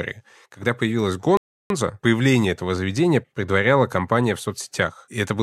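A speech clip with a rebuffering stall from 1.37 to 1.70 s. Playback drops to silence, then resumes exactly where it stopped on "появление этого заведения предваряла". About 0.33 s is added, nothing lost.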